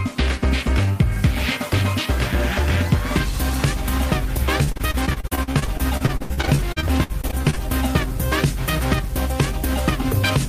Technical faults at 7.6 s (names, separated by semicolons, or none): unreliable data bit; repeated packet loss (robotic sound)